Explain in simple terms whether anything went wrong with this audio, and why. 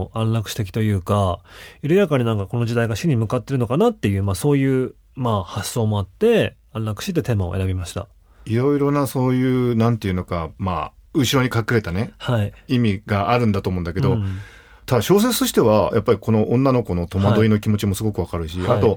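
Nothing went wrong; no faults can be heard anywhere here.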